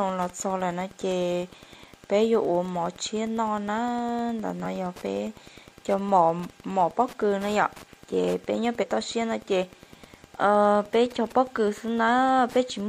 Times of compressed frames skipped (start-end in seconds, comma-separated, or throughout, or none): 4.60-4.66, 8.78-8.85